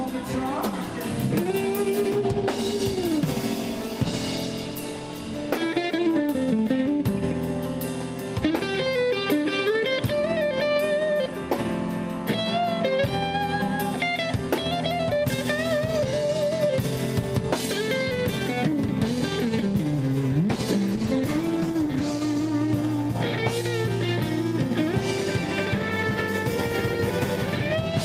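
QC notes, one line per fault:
0.33–6.39 s, call bitrate drop: the sound turns coarse and watery for about 6 s, which fits the encoder falling from 64 to roughly 25 kbps before recovering.
20.92–22.59 s, call bitrate drop: a harsher, muffled stretch of about 1.6 s with the top end dulled, consistent with the bitrate dipping to near 17 kbps.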